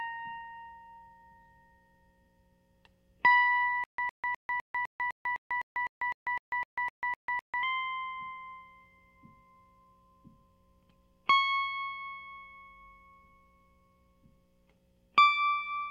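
From 3.84 to 7.63 s there's a stutter with silent gaps: a 109 ms music scrap repeats 15 times, each followed by 145 ms of dead silence, ticking every 254 ms. Likely a stalled stream replaying its last chunk, and the missing music is lost.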